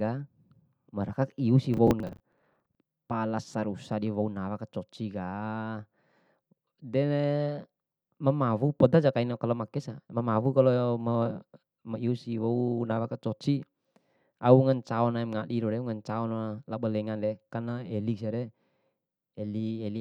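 Just after "marakaku iusi", from 1.74 to 2.75 s, a gritty crackle tears through the speech, with snatches of stale sound repeating at hard edges. This is processor overload crackle: the processor kept missing deadlines for short buffers, roughly 10 ms judging by the grain, and replayed old audio instead.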